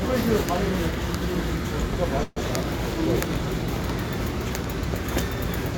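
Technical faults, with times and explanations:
2.23–2.38 s, call audio freeze: the sound stalls into a fading buzz for about 131 ms, then resumes exactly where it stopped, likely from late packets draining the jitter buffer. Unlike a dropout, nothing is lost; everything after simply arrives 131 ms later.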